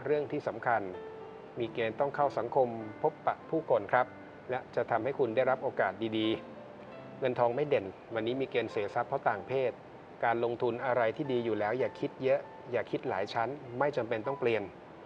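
Nothing is technically wrong with this audio.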